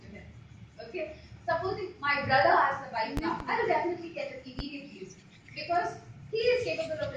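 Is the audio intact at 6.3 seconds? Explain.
Yes, the audio is intact at 6.3 seconds, with no dropout, click, distortion or other fault at that point.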